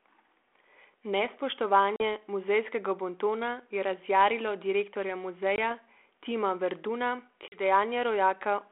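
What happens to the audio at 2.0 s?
A packet loss on an ADPCM call cuts a hard-edged hole from 1.96 to 2.03 s, with about 40 ms of a couple of packets missing. The decoder's adaptive predictor and step size lose track of the sender's. Speech resumes at "muzejskega bontona je razjarilo" with brief, slight distortion.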